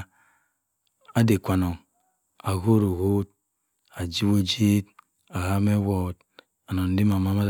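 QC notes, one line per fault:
No faults were found in this speech recording. There is nothing here to log for QC.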